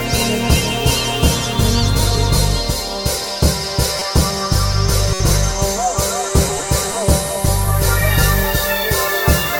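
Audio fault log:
3.97–4.02 s and 5.14–5.20 s: corrupt frame decoded, with flipped bits in a couple of frames each time, played as misplaced energy; brief chirps, blips or noise bursts, the second louder.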